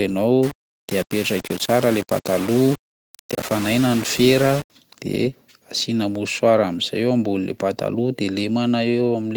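A speech recording in which, from 0.43 s to 4.70 s, the sound turns coarse and grainy, with grit that rises and falls with the speech and quiet stretches that sputter or drop out. The likely cause is low bit depth without dither, around 4 bits with rounding, leaving error only about 15 dB below the signal. A waveform would show visible stair-stepping, and a spectrogram broadband, signal-following noise smeared across the band, distinct from the full-band Opus compression around it.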